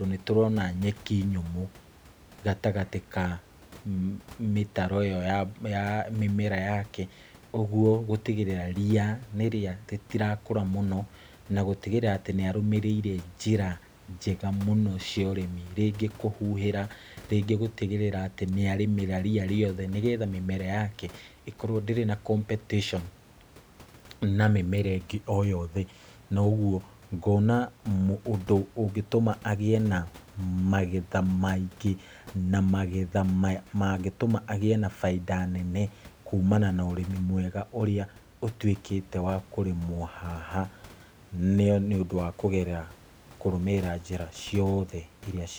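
The speech signal shows no technical faults, with only the room's own background noise audible at about 25 dB below the speech.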